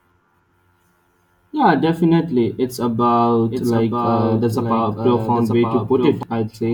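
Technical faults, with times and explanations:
3.45 to 6.23 s, doubled audio track: a second, full-band copy of the speech runs about a second behind the original and roughly 5 dB quieter, with no decay or room colour, cutting in and out abruptly; likely a slower capture path recording the same signal twice.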